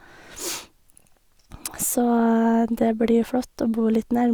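No technical faults occur in this speech recording, so there is nothing to describe in time order.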